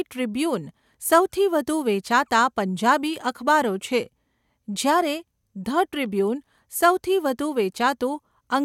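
Nothing to flag: no audible technical faults at any point in the speech.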